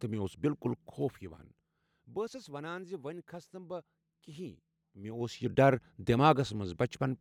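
Zipper noise starts at 0.68 s, just after "مےٚ اوس", and runs to 1.71 s. The level falls by about 15 dB in unsmoothed steps of about 1 dB, roughly ten a second. Each step clicks. From 4.95 to 5.46 s it rises in 2 dB steps, ticking again.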